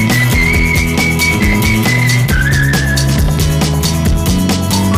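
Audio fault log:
throughout, hard clipping: the signal arrives about 8 dB hotter than the stage can pass, so every peak is sheared off flat at the ceiling, and roughly one sample in seven sits pinned there. Those squared-off tops generate a spray of high harmonics well above the original content, which is why loud passages carry a constant harsh fuzz rather than isolated crackles. The overload is deep enough that the distortion rides along with almost every louder moment.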